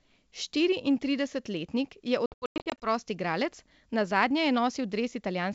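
Packet loss on an ADPCM call breaks up the speech from 2.26 to 2.87 s. Silent, hard-edged holes totalling 360 ms are scattered across that 560 ms stretch, the longest lasting 100 ms, which fits around twenty lost packets. Each gap leaves the receiver's adaptive predictor and step size out of step with the sender's, so the speech comes back with some distortion before settling over the next few tens of milliseconds, against the clear G.722 wideband sound around it.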